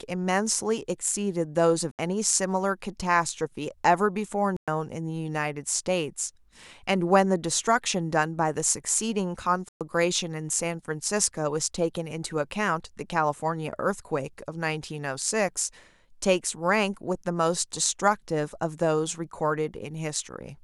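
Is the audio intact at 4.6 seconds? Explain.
No. A Bluetooth stall, likely interference holding up packets until the headphone buffer ran dry, drops the speech to silence from 4.57 to 4.68 s.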